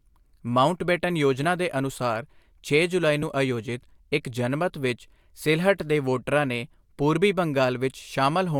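Three quick compressed frames skipped dropouts in this speech: at 1.43 s just before "ਦੇ ਅਨੁਸਾਰ ਛੇ ਜੁਲਾਈ", at 3.22 s right after that same phrase, and at 7.17 s after "ਸਿਲਹਟ ਦੇ ਵੋਟਰਾਂ ਨੇ". Each time the decoder loses what sounds like two or three frames, so the audio jumps forward by a few milliseconds.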